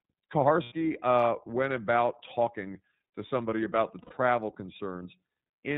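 Speech coded with the iLBC codec, apparently in its 13.33 kbps, 30 ms frame mode: nothing above 4 kHz survives, leaving plainly audible rough, synthetic coding damage. Lost iLBC frames cause two gaps of about 90 ms, at 0.63–0.72 s before "uh went about talking" and at 4.02–4.14 s after "to somebody about the". Each is concealed as a held, buzzy repeated pitch cycle, and the voice returns almost immediately.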